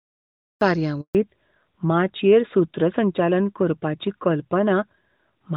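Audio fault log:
0.00 to 0.61 s, cut-off start: The clip opens on dead digital silence, and at 0.61 s the sound jumps in abruptly, already in the middle of speech, with no build-up or fade-in. The capture or stream evidently began late, so the opening of the utterance was never recorded, and the first thing heard is a hard edge instead of a natural attack.
1.01 to 1.15 s, handover gap: The speech drops away within a few tens of milliseconds and leaves a hole of about 140 ms before sound resumes. This is the signature of the call being passed from one network link to another. No speech frames got through during the switch, so whatever was said in that stretch is simply gone.
1.15 s to the end, fallback to narrowband: Right after the gap the speech turns duller and rougher, and all content above 4 kHz disappears for the rest of the clip. Before this point the wideband HD Voice codec was running cleanly at a high rate, consistent with about 23.85 kbit/s AMR-WB. 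The new link came up on an older narrowband codec, consistent with AMR-NB at 12.2 kbit/s, which cannot carry the upper band.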